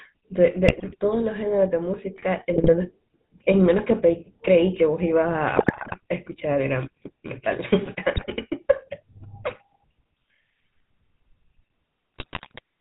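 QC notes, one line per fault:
Throughout: GSM full-rate codec. The speech has been squeezed through a vocal-tract model driven by sparse, regularly spaced pulses, which fits the 13 kbps full-rate coder. Nothing survives above 4 kHz, and the coarse excitation leaves a plainly audible buzzy, gravelly roughness on the voice.
0.68–0.96 s, 2.54–2.70 s, 5.56–5.96 s, 8.16–8.30 s, 12.16–12.60 s: GSM bit errors. Corrupted bits reach the decoder, so filter, pitch and gain values come out wrong for the affected frames. Each burst bends the spectrum or jumps the level, and the voice breaks into squawks, pops and gargling.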